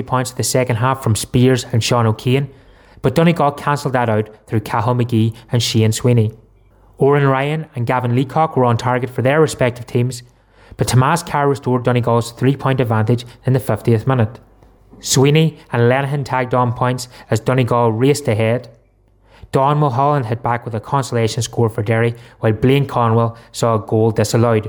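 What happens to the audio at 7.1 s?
Nothing goes wrong at 7.1 s; the audio plays through that moment intact.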